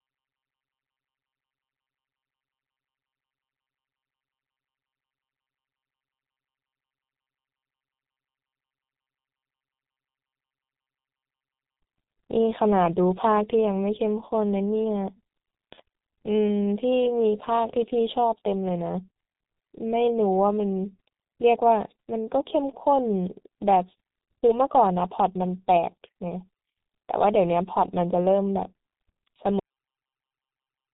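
From the first second the speech carries heavy G.723.1 codec damage. Nothing above about 3.8 kHz comes through, and the codec rebuilds the voice from a coarse model refreshed only every 30 ms frame, at a rate that sounds like about 6.3 kbit/s. The result is muffled and hoarse, with smeared consonants. That roughness and blurring is what separates it from a simple low-pass filter, which would dull the sound while leaving consonant edges clean.

At 29.59 s the audio suffers a cut-off end. The final buffers were never written or played, so the speech stops mid-sound and falls straight to digital silence, which lasts to the end of the clip. There is no decay tail, unlike a fade-out, and the sound never resumes, unlike a brief dropout. The stop is abrupt and permanent rather than gradual.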